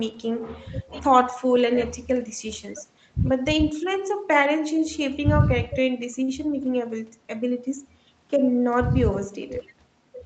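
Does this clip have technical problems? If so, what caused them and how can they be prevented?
Yes. At 6.23 to 6.29 s there is a short stall from a late packet: a packet arrived after it was due, the jitter buffer ran dry, and the receiver held the last sound for about 46 ms before resuming exactly where it stopped. Unlike loss concealment, no speech is skipped; the sound is stretched with a slight buzz or dip, and everything after it runs 46 ms later. A larger or adaptive jitter buffer, or a steadier network, would prevent it.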